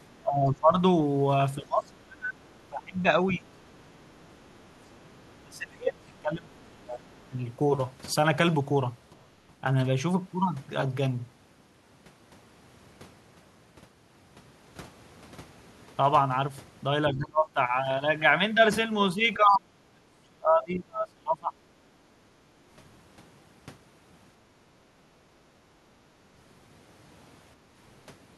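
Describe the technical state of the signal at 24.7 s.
At 24.7 s the room background is gated by the echo canceller, from 24.68 to 24.81 s. While far-end audio plays through the loudspeaker, the canceller clamps the microphone path to keep that sound from looping back, and here it pulls the ambience down by about 11 dB for around 150 ms before releasing. Unlike a packet dropout, the signal never falls to digital silence or clicks: the background dips and then comes back.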